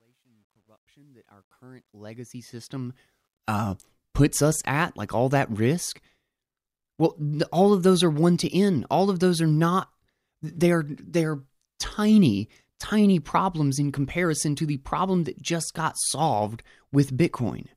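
Truncation distortion on the fade-in from 0 to 3.39 s sounds gritty, worst before 1.72 s. That fits an undithered fade kept to 11 bits, and it's clean by "uh puts us at".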